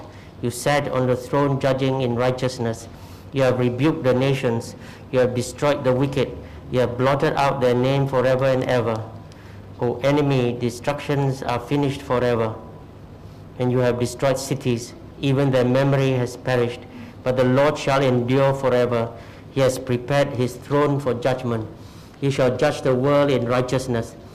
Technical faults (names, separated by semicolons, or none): none